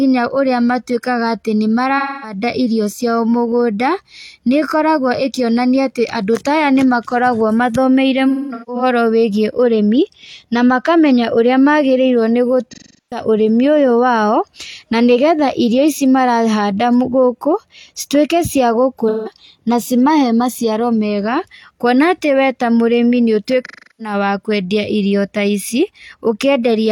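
AAC frame loss with concealment hits the speech at 1.97–2.38, 8.29–8.83, 12.72–13.22, 19.08–19.31 and 23.65–24.14 s. The decoder rebuilds the missing frames from the last good spectrum, so each gap of 170–380 ms smears into a noisy, phasey patch. At 8.3 s the losses are scattered, with the longest run about 200 ms.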